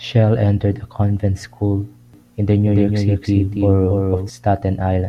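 From 2.14 s to 4.30 s, just after "entered a convent school", a doubled audio track appears: a full-band copy trails about a third of a second behind, roughly 5 dB quieter, likely from a second, slower capture path. Unlike room echo, it has no decay or reverberant colour, and it switches on and off abruptly.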